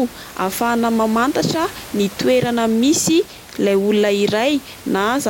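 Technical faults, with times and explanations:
No technical faults to list; the room's background noise sits about 20 dB below the speech.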